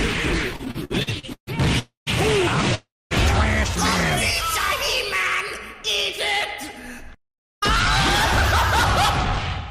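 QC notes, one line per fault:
0.53–1.49 s, repeated stalls (stutter): the sound catches and drags in ten short hitches, the longest about 140 ms, so roughly 40% of this stretch is filler rather than fresh audio. Packets were reaching the receiver more slowly than they were being played out, and the jitter buffer kept running dry. Each time, the receiver stretched the last sound to cover the wait, then picked up where it stopped, so nothing is lost but the flow stutters.
1.79–2.09 s and 2.75–3.13 s, call audio freeze: two holds, about 276 ms and 361 ms long. In each one the last sound carries on as a fading buzz and then drops into silence, about 140 ms of it in the first and 230 ms in the second. The sound then resumes exactly where it left off. Delayed packets likely emptied the jitter buffer, and the receiver filled the wait rather than skip ahead. The result is an added gap with nothing missing.
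6.73–7.59 s, jitter buffer speed-up: this stretch sounds hurried, running about 7% fast while the pitch stays put. After a backlog of audio built up in the jitter buffer, the receiver trimmed it back toward its target delay by cutting out many small slices, each a pitch period or so long, about 70 ms in all. Because only whole periods were removed, the pitch is unchanged and only the pace is affected.
8.85 s to the end, section at the wrong speed: the closing part drops by about two semitones and slows together with it, playing at 0.879 times its proper rate. Speed and pitch shift as one from the first moment of the section. This likely comes from the section being played or resampled against the wrong clock, which stretches the waveform itself rather than adjusting timing alone.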